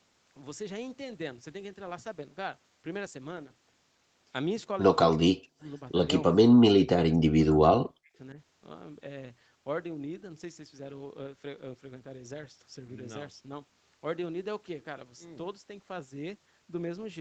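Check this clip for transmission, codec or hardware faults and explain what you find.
The speech drops out three times in short stretches, consistent with speech suppressed in double talk, heard through a call path whose audio stops near 8 kHz, consistent with wideband Opus at a moderate bitrate.

Speech suppressed in double talk occurs at 5.15–5.68 s, 6.65–6.87 s and 7.08–8.13 s. The likely cause is the far end talking at the same moment: the echo canceller cannot tell the local talker from loudspeaker echo and attenuates both. The speech sinks by as much as roughly 40 dB. The longest stretch of damage is at 7.08–8.13 s.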